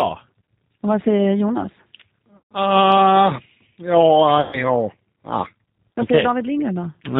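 Throughout the speech, the G.729 codec damage is plainly audible: a slightly rough, synthetic quality, consistent with an 8 kbit/s G.729A coder rebuilding each frame from a vocal tract filter, pitch predictor and a few pulses. A spectrogram shows a hard ceiling at 4 kHz and smeared, grainy harmonics below it.

From 2.37 to 2.53 s, and again from 4.41 to 4.64 s, VoIP packet loss is concealed by the speech codec. The gaps fit about 140 ms and 120 ms of missing audio. The decoder repeats its last pitch and filter, so the speech stretches into a fading buzzy tone or coloured noise and stays weak as it recovers. The waveform shows a repetitive, decaying envelope, and the spectrogram shows frozen horizontal bands.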